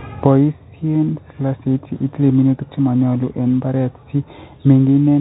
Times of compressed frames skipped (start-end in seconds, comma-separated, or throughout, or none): none